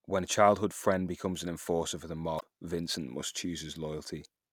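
At 2.37 to 2.41 s, just after "an enforcer for the", the speech breaks into a brief glitch lasting about 50 ms. This is damaged data in a compressed stream: corrupted bytes reached the decoder, which misread those frames, lost sync and hunted for the next valid frame header.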